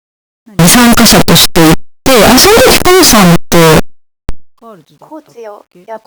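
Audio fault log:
0.59–4.29 s, signed and unsigned mixed up: very loud, harsh distortion with soft sounds as loud as strong ones, likely from 8-bit samples read with their top bit flipped.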